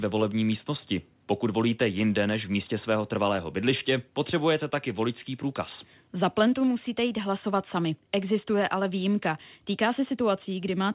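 No faults can be heard in the speech, which comes through a call path whose narrow band, with nothing above 4 kHz, fits the G.711 mu-law codec at 64 kbps.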